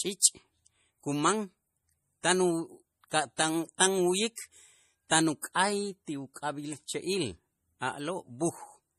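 Speech, with MP3 compression damage that is plainly audible from start to finish. Nothing is present above 15 kHz, a hard treble ceiling of the kind an encoder imposes when its bit budget runs short, and the damage level fits a low rate of around 40 kbps. At that rate the encoder is likely discarding weak spectral detail frame by frame, leaving a watery, swirly quality across the whole recording rather than at any particular moment.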